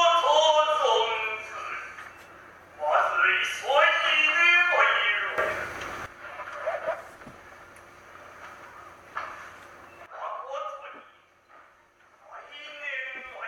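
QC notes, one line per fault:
5.38–6.06 s, sudden gain jump: level steps up by about 12 dB with no ramp, then returns; the background noise rises with the sound, likely from a digital gain setting applied instantly.
10.06 s to end, sudden gain jump: level abruptly drops by about 14 dB and stays down, noise floor included, likely an unramped gain change.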